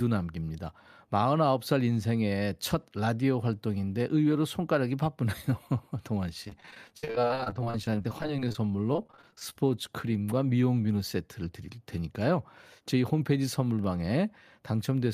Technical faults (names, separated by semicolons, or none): repeated packet loss (robotic sound); jitter buffer speed-up